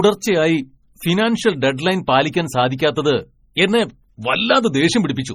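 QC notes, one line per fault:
Throughout, MP3 compression: heavy watery, swirling artefacts and nothing above 16.5 kHz, likely from an encoder starved of bits, which fits a rate near 32 kbps.
2.78 s, pre-echo: a short hiss spreads about 16 ms ahead of a sharp attack, as block-wide quantisation noise fills the quiet before it.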